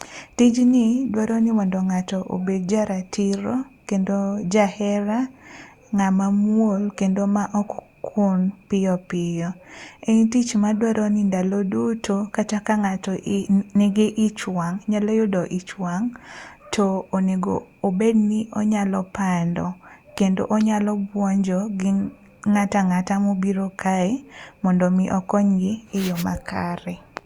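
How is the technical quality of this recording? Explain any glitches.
There's one glitch, right near the start of the speech. From 0.57 to 2.02 s you get a block size mismatch (truncated): one stage hands over blocks that are longer than the next stage reads, so the tail of every block gets chopped off. Each cut lands at the same rate, which puts a steady buzz at about 92 Hz over the voice. The pacing doesn't noticeably speed up.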